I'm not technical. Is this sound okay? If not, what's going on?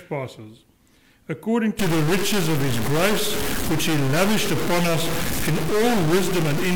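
No. From about 1.79 s to the end, the sound turns harsh and buzzy, and quiet gaps fill with gritty noise. This is a stuck bit, likely one digital data line frozen at a fixed value, and a fairly significant one, so the noise is clearly audible.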